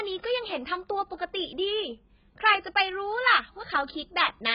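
From start to finish the speech has nothing above about 5.1 kHz, and what remains sounds dull and smeared, with a watery, warbling fizz on sibilants and held sounds. This is likely AAC compression, the heavy damage pointing to AAC-LC at a very low bitrate, around 12 kbps. The encoder discards upper bands and starves the rest of bits. A simple low-pass filter would give the same dullness but not the shifting, bubbling texture.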